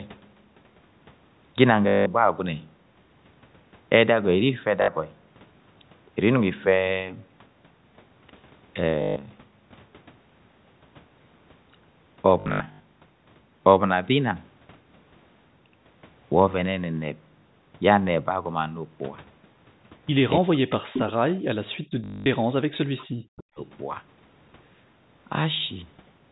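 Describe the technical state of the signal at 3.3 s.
At 3.3 s the speech is intact, carried through the call's microphone processing and G.711 telephone coding with no fault at that moment.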